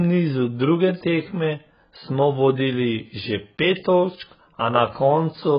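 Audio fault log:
Throughout, AAC compression. The speech is dull and smeared, with nothing above 5 kHz and a warbling, fizzy texture on sibilants and held sounds. Heavy damage of this kind fits AAC-LC at around 12 kbps, likely starving bands and leaving spectral holes.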